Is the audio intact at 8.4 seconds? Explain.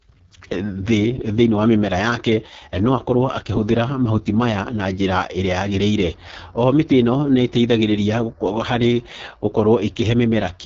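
No. The whole clip, including 8.4 s, runs through the AMR wideband (HD Voice) codec at its lowest rate, likely near 6.6 kbit/s, leaving the speech rough and raspy, with nothing above 7.4 kHz.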